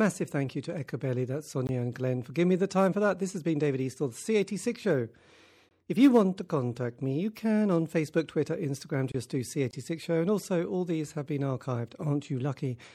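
MP3 compression damage runs through the whole speech clip: the treble is cut off and weak detail flickers between frames, giving a watery, swirly sound with smeared attacks. The plainly audible damage fits a low bitrate of around 64 kbps, likely the cause.

Gaps between chunks come at 1.67 s and 5.69 s. Each is a 20 ms hole, repeating every 4.0 s. The audio arrives in chunks, and a short silence sits at each join, interrupting the sound without losing any of it.

A gap at a join of encoded pieces opens at 9.12 s and lasts about 27 ms. Two separately encoded pieces were joined untrimmed, so start-up delay and end padding leave a silence with smeared edges, and the sound resumes where it stopped.

Another gap between chunks follows at 9.71 s, the same 20 ms hole, keeping the 4.0 s spacing.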